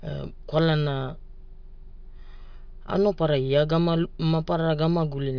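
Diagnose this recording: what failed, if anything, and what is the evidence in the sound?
Nothing failed: no stage from the analogue wiring through conversion, processing, transmission and storage to playback leaves a fault that can be heard anywhere in the speech.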